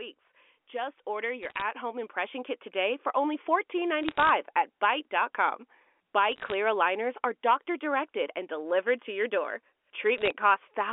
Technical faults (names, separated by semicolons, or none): automatic gain rising; bit errors on a digital phone line